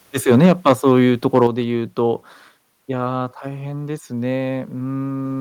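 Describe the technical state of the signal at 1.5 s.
At 1.5 s the signal has just come out of a short microphone overload from 1.34 to 1.47 s, where peaks run about 3 dB past the converter's limit and a few percent of samples are flattened. The likely cause is input gain set too high, giving a harsh crackle with squared-off waveform tops and smeared high-frequency energy on a spectrogram.

Right at 1.47 s the microphone volume is stepped down by about 7 dB, so sound and background fall together abruptly. This is likely automatic gain reduction reacting to the clipping. The waveform envelope drops visibly at that instant, and every spectrogram band dims at once.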